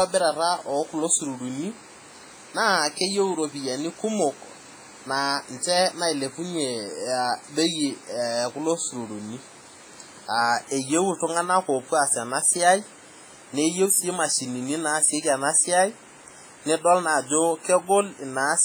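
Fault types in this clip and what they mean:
WMA compression: heavy transform-codec damage, likely from a low bitrate near 24 kbps, gives ringing, washy speech; spectrograms show smeared onsets and blank patches where weak components vanished.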